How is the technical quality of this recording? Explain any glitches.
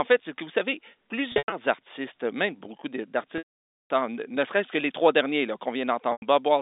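The recording has three dropouts from packet loss with pitch repetition, over a narrow telephone band of roughly 250 Hz to 3.7 kHz. At 1.32–1.52 s, after "c'est que vous savez", short scattered losses (longest 100 ms) sound like a briefly held buzz. At 3.38–3.90 s, after "artistes même beaucoup", a 520 ms loss fades to silence. At 6.12 s, after "les trois derniers là", a 100 ms loss sounds held. The receiver loops the last pitch cycle and fades it out. On a spectrogram this shows as flat, repeated harmonic stripes, then a blank gap for the long loss.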